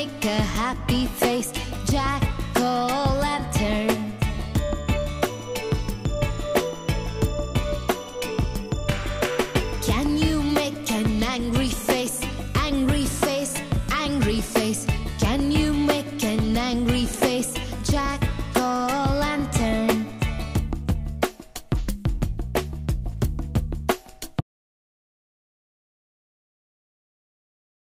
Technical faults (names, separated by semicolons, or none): audio dropout to silence